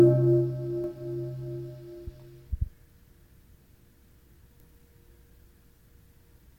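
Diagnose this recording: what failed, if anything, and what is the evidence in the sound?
The converter's sampling clock is unstable, producing sample clock jitter across the whole recording. Each sample is taken slightly early or late at random, with a timing wobble of around 3 microseconds. Because the resulting error scales with how steeply the waveform is changing, it shows up as a fine hiss or roughness riding on the sound. It sits roughly 45 dB below the signal, grows on loud and bright passages, and drops away when the sound is quiet.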